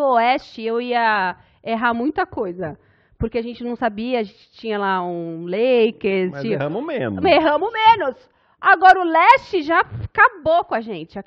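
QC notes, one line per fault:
No faults heard at any point.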